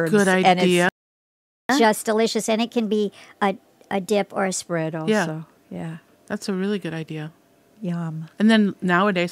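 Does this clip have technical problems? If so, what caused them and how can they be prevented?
Yes. From 0.89 to 1.69 s the speech cuts out for about 0.8 s in a playback stall, most likely caused by the player running out of buffered data. The waveform drops to a flat line and the spectrogram shows a blank vertical gap. A larger playback buffer would prevent it.

Catch-up at higher speed follows from 1.69 to 4.69 s. The backlog is resampled at 1.15 times normal speed, raising the pitch by about two semitones. On the spectrogram the harmonic bands shift upward and spread apart, and the waveform's syllable envelopes look compressed before returning to normal. Catching up with pitch-preserving time-stretching, or skipping the backlog, would avoid it.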